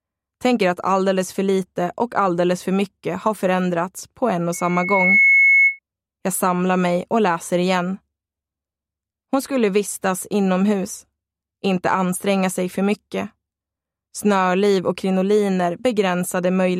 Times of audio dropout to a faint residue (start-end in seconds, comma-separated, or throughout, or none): none